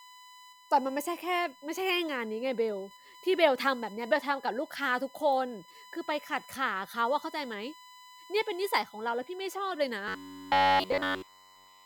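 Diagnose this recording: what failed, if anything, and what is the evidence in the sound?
A USB whine runs under the speech for the whole recording. It is a steady tone at 1 kHz, its strongest component, sitting about 25 dB below the speech. The stage is analogue wiring, power and ground. The USB bus draws current in 1 ms frames, and that pulsing leaks into the audio path through the supply or a shared ground. The result is a whine of fixed pitch.

From 10.08 s to the end at 11.85 s, the speech turns into a rigid, metallic buzz with a fixed pitch of 93.8 Hz. In that stretch, essentially all the sound seems to be repeated material. The likely cause is robotic sound from repeated short buffers, at the driver or buffer stage. New audio arrives too late, so the last fragment is replayed. One over 93.8 Hz is about 10.7 ms, the length of the repeated buffer.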